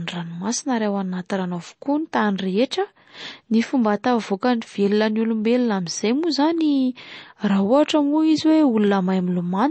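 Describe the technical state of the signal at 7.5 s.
At 7.5 s you're hearing the same damage that runs through the whole speech clip. Nothing survives above 8.3 kHz, and sibilants turn watery and swirly as weak frequency lines drop in and out between frames. That's likely MP3 compression starved of bits, which fits roughly 32 kbps.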